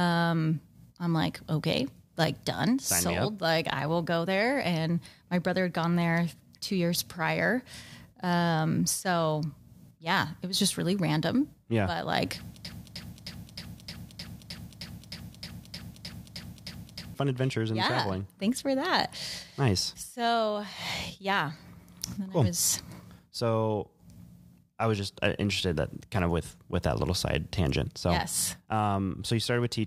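A broken-record loop runs from 12.65 s to 17.14 s in this speech clip: a fragment about 309 ms long repeats exactly, back to back, 15 times, giving a stuttering, mechanical chatter for roughly four and a half seconds. The likely cause is a stall in the player, encoder or stream, which kept replaying the last piece it held. Whatever should have played there is gone, and normal audio resumes with "adventures and yeah traveling".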